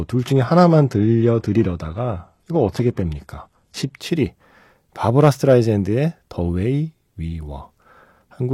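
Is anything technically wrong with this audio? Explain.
Yes. From 0.0 to 4.0 s the speech shows an adaptive stream starting at a low bitrate. The player began on a cheap, fast-loading version and switched up once it had measured the connection. Until then the treble is thin and partly synthetic, with nothing above about 12.3 kHz and stronger codec artefacts, which points to a heavily compressed HE-AAC stream. At 4.0 s the sound sharpens abruptly. Unlike a dropout or a codec renegotiation, there is no gap or glitch at the change.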